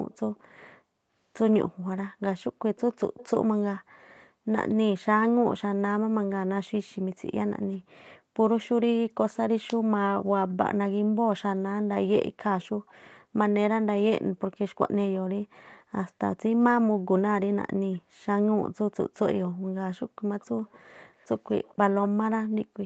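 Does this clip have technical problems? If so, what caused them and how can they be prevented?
Yes. Echo leak is heard at 0.11–0.65, 2.76–3.28, 8.63–9.37, 12.62–13.16, 17.94–18.02, 19.15–19.49 and 20.4 s to the end: a faint delayed copy of the speech, about 260 ms late at first and about 230 ms late from 17.9 s. It is loudest near 3 s and very low elsewhere. Unlike room reverberation, which decays smoothly, this is a distinct repeat at a fixed lag. The likely cause is an echo canceller on a loudspeaker endpoint letting residual playback back into the call. Using a headset, or a device with better acoustic echo cancellation, prevents it.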